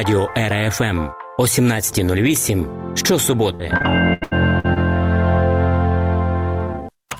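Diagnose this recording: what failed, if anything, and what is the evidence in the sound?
Choppy sound with pieces missing from 3.55 to 4.78 s, with seven short holes up to 80 ms each patched by stretching the preceding sound. About a quarter of that stretch is concealment. This is repeated packet loss (robotic sound) at the network stage.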